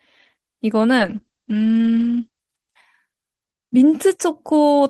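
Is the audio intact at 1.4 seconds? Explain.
No. A call bitrate drop runs from 0.99 s to 2.47 s, so 1.4 s falls inside it. The connection's bandwidth estimate collapsed and the encoder was forced from 32 kbps down to 9 kbps, staying at that floor for about 1.4 s. With so few bits it quantises the speech coarsely and narrows the coded band from 20 kHz to 8 kHz, so the speech sounds muffled, rough and watery until the rate recovers.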